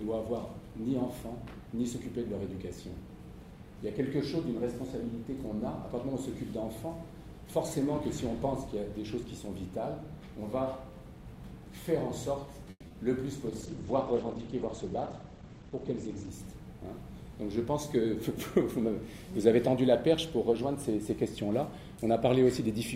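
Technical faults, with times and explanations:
12.70 to 12.83 s, call audio freeze: the sound stalls for about 120 ms. The last moment is drawn out as a fading buzz or hiss and then drops into about 40 ms of silence before the audio resumes where it stopped. The likely cause is packets held up in transit, which drained the jitter buffer so the receiver had to improvise. The stream then picks up late rather than skipping ahead, so the stall adds about 120 ms of delay and nothing is lost.
12.87 to 12.91 s and 12.92 to 12.94 s, short concealed packet loss: right after the freeze come two brief losses, about 30 ms and then 10 ms of audio that never reached the decoder in time. Each hole is patched by extending the preceding sound and then blending back into the real signal. That leaves a quick smear or flutter instead of a hard dropout, and whatever fell in those slivers is genuinely gone.
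13.47 to 16.36 s, call bitrate drop: the encoder's budget falls from 128 kbps to about 13 kbps and stays at that floor for roughly 2.8 s. With so few bits, Opus quantizes coarsely and narrows the audio band from about 20 kHz down to 8 kHz. The sound turns dull and muffled, with a rough, watery texture, until the bandwidth estimate recovers and full quality returns.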